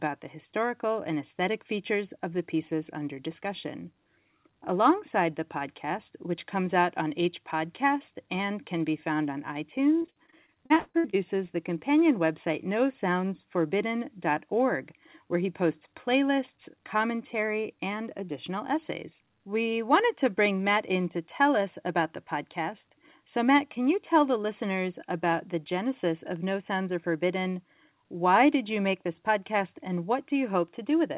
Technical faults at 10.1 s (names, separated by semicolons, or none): repeated packet loss (robotic sound)